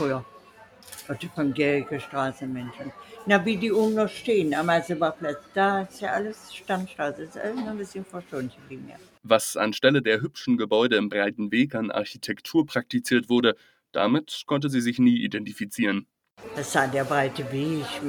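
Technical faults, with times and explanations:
Throughout: noise suppressor applied to the sound. A speech-tuned suppressor treats sustained tones and tails as noise, so level swings by around 10 dB with how steady the sound is rather than how loud, unlike compressor pumping. Attacks mostly pass.
0.24–1.37, 2.33–3.27, 5.40–5.56, 6.34–7.39, 7.87–9.26, 12.14–12.47, 13.56–13.95 s: sound cut by the noise suppressor. Held or decaying parts sink by about 9 to 12 dB and tails end early while onsets mostly come through, which separates this from a dropout or a gain dip.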